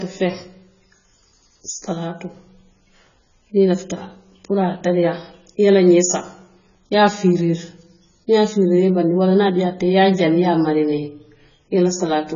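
Throughout the speech, nothing sounds above 7 kHz, and heavy coding damage is audible. This is likely AAC compression, which fits AAC-LC at a bitrate around 16 kbps.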